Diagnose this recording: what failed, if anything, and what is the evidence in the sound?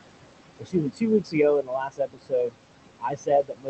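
Noise suppressor artifacts throughout, from call processing: the room noise is cut by about 21 dB in the pauses, then rises under the speech.

Speech cut by the noise suppressor at 0.59–1.03 s, 1.2–1.36 s, 1.61–2.55 s and from 3.0 s to the end: the suppressor took speech for noise and dropped it by up to about 22 dB, so it sounds swallowed.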